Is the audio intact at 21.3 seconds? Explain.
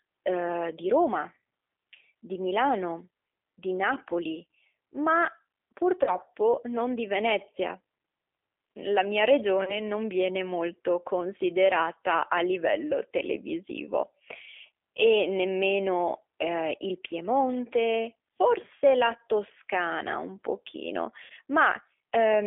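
No. VoIP packet loss concealed by the speech codec affects 21.24 to 21.32 s. About 60 ms of audio went missing, which fits two lost packets. The decoder filled the gap by repeating its last pitch and filter settings while lowering the gain frame by frame, so the sound smears into a fading buzzy tone or coloured noise rather than a clean silence. Because each frame is built from the previous one, the sound stays weak and distorted briefly after the packets return.

The G.729 codec also runs through this moment, as it does for the whole clip. It rebuilds speech from a vocal tract filter, a pitch predictor and a few pulses per frame, and the coarse, slightly synthetic roughness fits an 8 kbit/s codec of this kind. The band is confined to about 300 Hz to 3.4 kHz, so the sound is muffled and thin. The coding damage is plainly audible here.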